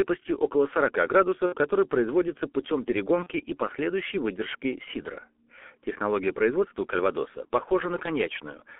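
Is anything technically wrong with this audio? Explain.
Yes. The whole clip has been through the G.723.1 codec at about 6.3 kbit/s, with heavy damage. The line band runs from roughly 250 Hz to 3.4 kHz, so the speech sounds muffled and hoarse and the consonants smear. A spectrogram shows nothing above about 3.4 kHz, and the harmonics look blurred because the voice model updates only slowly across its 30 ms frames.

VoIP packet loss concealed by the speech codec occurs twice, from 1.46 to 1.56 s and from 3.23 to 3.28 s. The lost audio is about 60 ms in the first gap and 30 ms in the second, which suggests two frames and then one were missing. The decoder fills each gap by repeating its last pitch and filter with falling gain. You hear a brief buzzy or noisy stretch that fades. On a waveform the envelope decays smoothly, and a spectrogram shows flat, repeated harmonics there.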